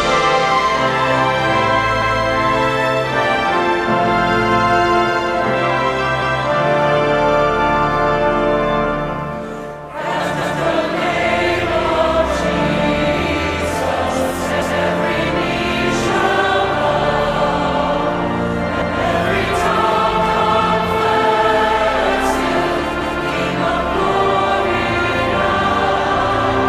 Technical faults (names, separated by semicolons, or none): overlapping chunks